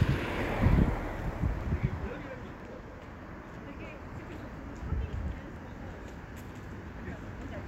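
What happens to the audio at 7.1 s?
Regular ticks run through this stretch from periodic USB or driver dropouts spanning 0.62 to 7.54 s: every 0.99 s a stalled bus or driver skips about 10 ms of audio.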